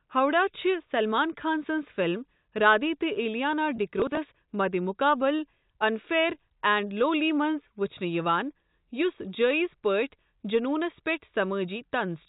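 At 3.76 to 3.78 s there's a brief packet loss with pitch repetition. About 20 ms went missing, which fits a single lost packet, and the receiver covered it by replaying the last pitch period, so you hear a tiny held, slightly buzzy moment before the speech carries on.

Right after, from 4.00 to 4.17 s, comes processor overload crackle, ending just before "مدِمقابل انفیئر". The processor kept missing its deadlines on what sounds like roughly 10 ms buffers, around seven of them, each skipped outright, giving a short gritty tearing over the speech. All of this rides on the G.711 telephone coding, which keeps everything under 4 kHz.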